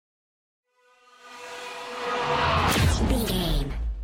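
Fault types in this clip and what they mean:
Section at the wrong speed: from 2.67 s to the end the sound turns higher and hurried, about three semitones up at 1.19x, likely from playback against a mismatched clock.
Damaged data in a compressed stream: a brief glitch from 3.26 to 3.30 s, where the decoder misreads corrupted frames, loses sync and hunts for the next frame header.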